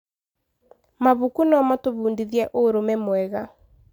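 Listening closely to the speech in this recording, nothing stood out as a technical fault at any point.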